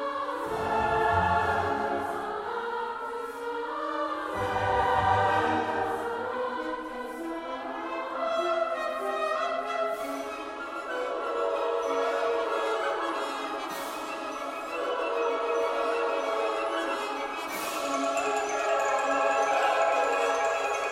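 No technical faults can be heard anywhere in the recording.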